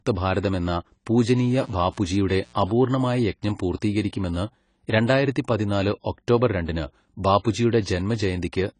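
From the start the whole speech clip has plainly audible codec damage, likely AAC compression at a low bitrate around 24 kbps: nothing above 10 kHz, with a dull, smeared, warbly texture. From 1.33 to 2.98 s a mains buzz comes in, a steady raspy 60 Hz buzz with harmonics from switching spikes, sitting about 30 dB under the speech.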